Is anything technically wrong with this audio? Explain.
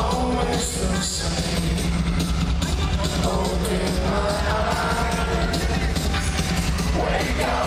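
Yes. A train of clicks runs from 4.81 to 5.78 s. About ten similar clicks arrive unevenly, near 10 per second, peaking about 5 dB above the sound. Interference, or a faulty connection or power supply, likely injects these pulses. They tick over the audio.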